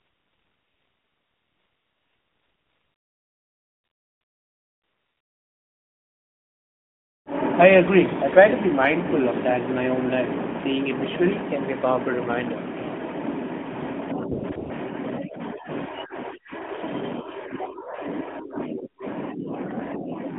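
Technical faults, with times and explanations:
0.00–7.26 s, AMR comfort noise: for more than seven seconds the phone judged the talker silent and sent no speech frames. The receiver filled the gap with a smooth, steady synthetic hiss built from a rough level-and-spectrum estimate, replacing the real background.
14.32–14.70 s, AMR comfort noise: three quick dropouts at 14.32–14.44 s, 14.50 s and 14.56–14.70 s, where the 12.2 kbps narrowband stream (band limited to about 150 Hz–3.5 kHz) switches to synthetic noise. The background flickers, and quiet sound around those moments can be clipped.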